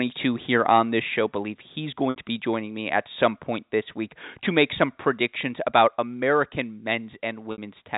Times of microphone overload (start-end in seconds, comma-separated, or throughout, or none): 0.55-0.80, 4.60-4.83, 5.75-5.82